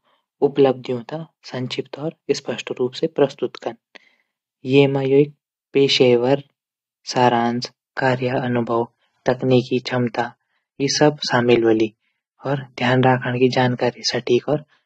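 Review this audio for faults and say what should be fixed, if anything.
At 7.96 s the speech switches abruptly, with no gap, to an adaptive stream at a lower bitrate, and it stays there to the end. Codec artefacts rise, consistent with the player dropping from roughly 96 kbit/s AAC to around 27 kbit/s after the connection slowed. On a spectrogram, energy above 13.6 kHz vanishes at that instant, leaving a hard flat ceiling, while the waveform stays continuous. Setting a higher minimum bitrate in the stream's quality ladder, or buffering more before playback, would prevent the downswitch.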